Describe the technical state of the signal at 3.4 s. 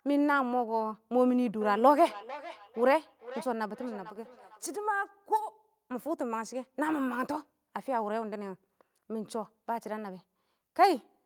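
At 3.4 s the speech carries feedback echo between two devices, running from 1.61 to 5.1 s. A second device replays this microphone's sound, and the microphone picks it up again. Each phrase returns about every half second, thinner and ringing, peaking about 14 dB below the speech.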